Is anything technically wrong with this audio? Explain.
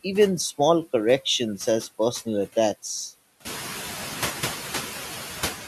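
Yes. Noise suppressor artifacts run through the whole speech clip. The suppressor pulls noisy bands down by about 5 dB frame by frame, so the background sinks in gaps and swells under speech, pumping audibly. On a spectrogram the noise floor dips between syllables. This is most noticeable after the room noise rises by about 14 dB around 3.5 s, ending about 9 dB below the speech.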